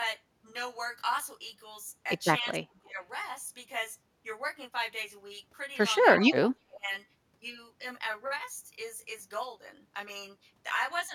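Throughout, the speech sounds rough and slightly doubled, with fixed, evenly spaced notches: channel delay (comb filtering), one channel lagging by roughly 20 ms before a mono sum.

From 2.42 to 3.0 s and 6.11 to 6.9 s, the speech dips by up to about 25 dB, likely speech suppressed in double talk by an echo canceller.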